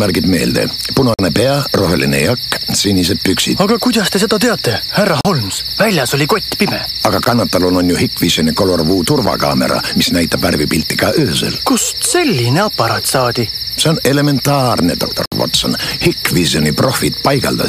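Gaps between stream segments cut the sound with hard-edged silence at 1.14–1.19 s, 3.21 s, 5.21–5.25 s, 7.25 s, 9.26 s and 15.26–15.32 s, lasting between about 4 and 62 ms. They recur at the 2-second segment boundaries, where mismatched timestamps leave holes that the player fills with silence.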